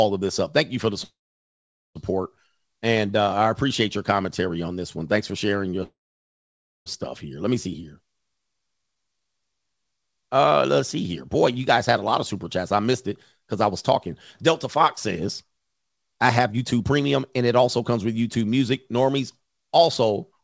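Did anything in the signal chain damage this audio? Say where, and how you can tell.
Yes. Call audio freezes at 1.04 to 1.97 s and 5.83 to 6.88 s. Each time, the last sound carries on briefly as a fading buzz, then drops to near silence for about 0.82 s and 0.92 s. The sound then resumes exactly where it stopped, with nothing skipped, so each event adds roughly 0.9 s and 1.0 s of delay. This is likely a network stall that drained the jitter buffer while the receiver concealed the gap.

Jitter buffer speed-up runs from 13.64 to 17.38 s. The speech moves at about 107% of normal pace while its pitch stays the same, giving a slightly hurried delivery. Overall, about 0.3 s of audio is trimmed away in many small pitch-period slices, as the buffer sheds excess delay it had built up. The G.722 call path, with its band ending at 8 kHz, carries this passage too.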